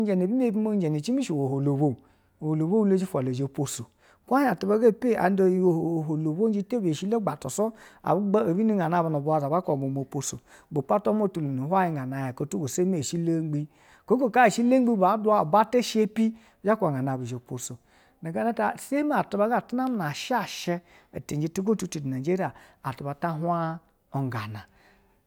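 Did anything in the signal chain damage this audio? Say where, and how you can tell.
Yes. Between 1.89 and 4.24 s there is crude rate conversion at the sample-format conversion stage. A gritty, inharmonic fizz rides on the speech there. It rises with louder and brighter sounds and sits roughly 35 dB below the speech. The tones are shifted copies of the voice that are not harmonically related to it. That fits a 44.1 kHz to 48 kHz change done by linear interpolation without a proper filter. The interpolation error repeats in a fixed cycle and folds back as spurious tones.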